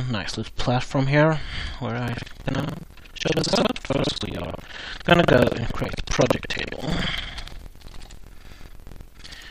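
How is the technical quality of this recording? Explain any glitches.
The recording has one clear fault: buffer tearing. It starts at 2.04 s and runs to the end at 9.50 s. A steady robotic buzz appears at 21.5 Hz, whenever there is signal. The writing program and the playback hardware have drifted out of step. Their positions cross inside every buffer period. About two fifths of each buffer replays audio from roughly a tenth of a second earlier. Hard joins on both sides produce the rattle. The rate fits a 2048-sample buffer.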